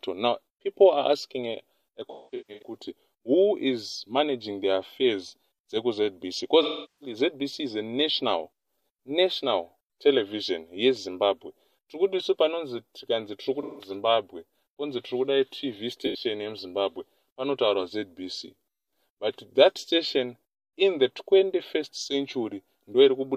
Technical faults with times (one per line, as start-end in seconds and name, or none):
2.11-2.77 AAC frame loss with concealment
6.62-7.16 AAC frame loss with concealment
13.63-13.90 AAC frame loss with concealment
16.06-16.24 AAC frame loss with concealment